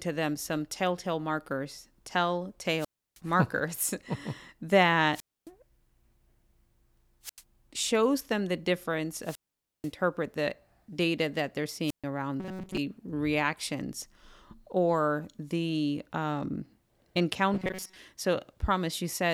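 A speech recording that keeps cutting out: at 2.77–3.20, 5.11–5.50, 7.23–7.42, 9.21–9.92 and 11.86–12.04 s a short swell of hiss gives way to near silence before the voice comes back. These are wireless microphone squelch dropouts. The FM radio link weakens until the receiver's squelch shuts the output, with muted stretches of about 0.32, 0.27, 0.09, 0.49 and 0.13 s. Twice more, at 12.40–12.77 and 17.54–17.97 s, the voice turns into a stiff, metallic buzz pitched at 188 Hz that only loosely tracks the speech. This is robotic sound from repeated short buffers, likely caused by the playback chain looping roughly 5 ms of audio while it waits for fresh data. Most of the real signal in those spans is skipped, and the loop rate sets the fixed pitch.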